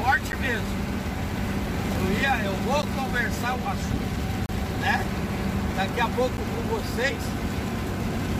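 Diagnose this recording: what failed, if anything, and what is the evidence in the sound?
Blocks of digital silence at 0.32, 2.82, 6.37 s (10 ms) and 4.46–4.49 s (30 ms): unfilled driver buffers zeroed, flat waveform gaps, vertical spectrogram click lines.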